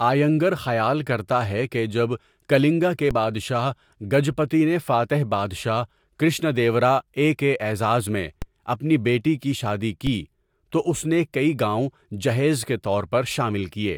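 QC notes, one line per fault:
3.11 s, 8.42 s and 10.07 s: DC step. At each point the zero line jumps by about -16 dBFS and then bleeds away, as if through a 20 Hz high-pass, within a few tens of milliseconds. This gives a low thump while the speech carries on unaltered. On the waveform the trace lifts off centre and sags back. On a spectrogram each step is a brief vertical smear, strongest below 100 Hz.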